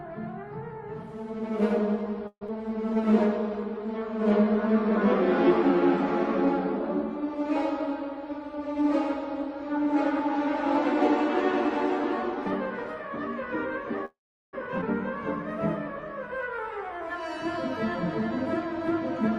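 A long network dropout is the likely cause of the break at 2.27 to 2.50 s. The last sound is stretched into a fading buzz or hiss for about 207 ms, ending in about 60 ms of silence, and about 100 ms of audio never returns.

A jitter buffer slow-down runs from 2.95 to 4.46 s. The receiver repeated single pitch periods to rebuild its reserve, adding 92 ms, so the sound plays at 94% speed with drawn-out sounds at unchanged pitch.

A jitter buffer speed-up runs from 8.15 to 13.48 s. Short pitch-period slices, about a tenth of a second in total, were trimmed to cut excess delay, giving 102% speed.

A call audio freeze is the likely cause of the stall at 14.05 to 14.55 s. The sound is held as a fading buzz or hiss for 476 ms, including about 390 ms of silence, then resumes exactly where it stopped, with nothing lost.

A skip ahead occurs at 14.81 to 14.84 s. Roughly 200 ms of audio was discarded while later packets were already waiting, so playback jumps forward through a near-seamless join of only 10 ms.

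A second jitter buffer speed-up runs from 16.71 to 19.30 s, again at 102%. Roughly 50 ms of pitch-period pieces were removed to trim buffer delay.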